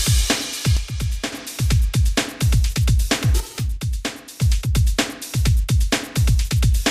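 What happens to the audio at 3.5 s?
Likely one channel drops out, from 3.40 to 4.42 s: the sound abruptly falls about 6 dB, as losing one of two matching channels halves the mono sum.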